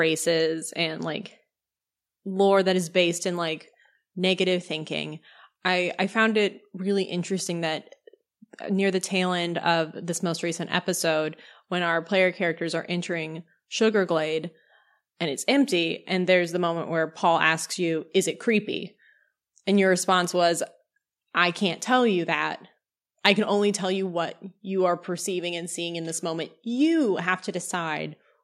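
At 20.25 s the microphone volume stepped down: the level of the speech and the background drops together, by about 1 dB, in a single instant step rather than a gradual fade. The likely cause is the call software lowering the input volume of the capture device because it judged the microphone too hot. At only about 1 dB the change is subtle, heard as a slight, sudden loss of presence that stays for the rest of the clip.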